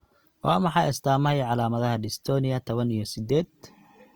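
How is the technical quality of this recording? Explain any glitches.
The speech sounds grainy and rough from start to finish, with a noisy, sandy texture on voiced sounds, while the full bandwidth survives up to about 20.1 kHz. The likely cause is Opus compression in its music (CELT) mode, at a rate that fits around 24 kbps. The encoder keeps each band's energy but fills starved bands by folding lower ones or injecting noise, which turns clean harmonics granular.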